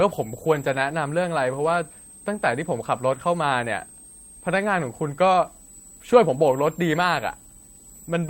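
From start to finish, a thin, high whistle sits under the speech, wandering between about 7.4 and 8.5 kHz and roughly 25 dB below the voice. This is switching supply whistle: a power converter dropping into an audible burst mode, or two converters beating. Unlike mains hum or a steady interference tone, its pitch drifts as the supply's load shifts rather than holding one fixed frequency.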